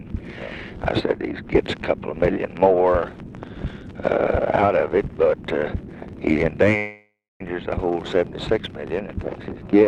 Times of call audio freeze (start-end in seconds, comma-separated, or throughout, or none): 6.77-7.42